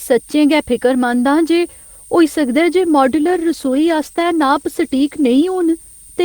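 A switching supply whistle runs throughout, a thin tone wandering near 8.9 kHz, roughly 25 dB under the speech, drawn as a faint horizontal line on a spectrogram. From 3.07 to 5.75 s a call bitrate drop coarsens the speech into a rough, muffled sound. The spectrogram's upper band empties, which fits the encoder falling from 32 to 15 kbps.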